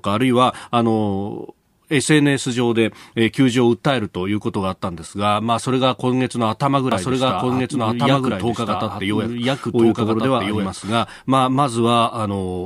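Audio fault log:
6.92–11.04 s, doubled audio track: a second full-band copy of the speech runs about one and a half seconds behind, roughly as loud as the original, with no decay or room colour, and it cuts in and out abruptly, likely from a slower second capture path.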